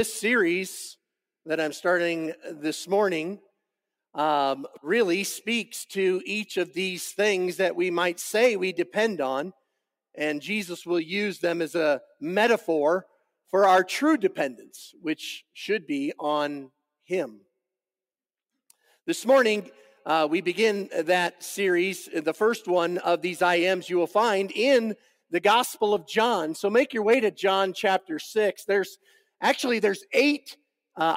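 Sound cut by the noise suppressor at 24.97 to 25.32 s and again at 29.01 to 29.41 s: the suppressor mistook this sound for noise and pulled it down by about 18 dB and about 17 dB, leaving each passage sunken for roughly a third of a second.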